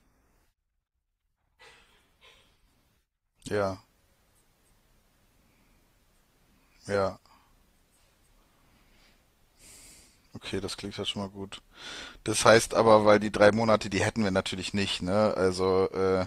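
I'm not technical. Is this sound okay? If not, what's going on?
No. From 1.81 s to 13.81 s the speech drops into a lower-quality version, a fault called an adaptive stream at a lower bitrate. The stream switched to a thinner copy when the connection slowed, so compression artefacts build up in the sound, then the quality abruptly returns, with no gap either way.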